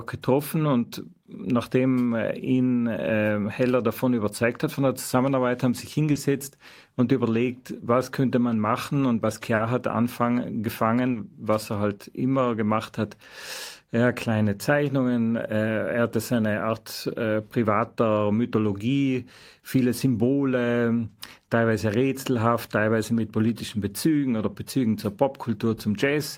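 Around 40 ms of the speech stream arrived too late for the decoder at 6.11, 9.55 and 11.11 s, and each time the receiver covered the gap by extending the preceding sound before blending back: short concealed packet loss, heard as a brief smear or wobble.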